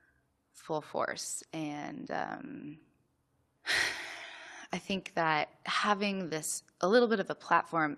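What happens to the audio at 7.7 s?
Nothing goes wrong at 7.7 s; the audio is intact at that moment.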